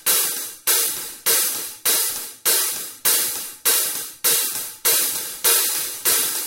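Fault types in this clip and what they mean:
No technical faults detected in this recording of sounds.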